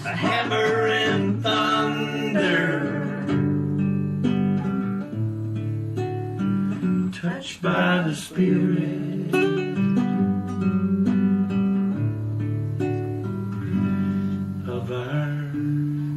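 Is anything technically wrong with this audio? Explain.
Yes. Throughout, the sound is watery and swirly, with metallic chirps on bright, hissy sounds and smeared attacks. This is likely MP3 compression at a low bitrate, fitting about 64 kbps, where the encoder drops treble and zeroes weak frequency lines that flicker between frames.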